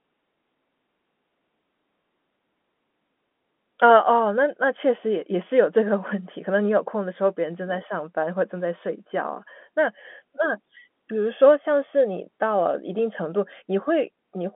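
Telephone-band speech, with no audible technical faults.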